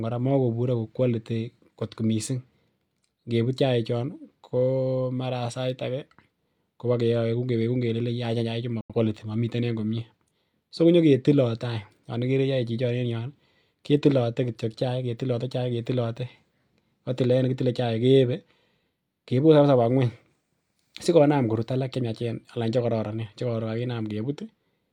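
At 8.81 s the speech snaps to silence for about 0.13 s, returning at 8.94 s: a digital broadcast dropout, where the receiver muted after losing what sounds like two frames.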